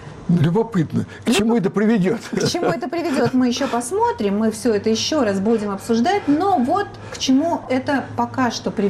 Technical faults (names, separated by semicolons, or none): corrupt frame decoded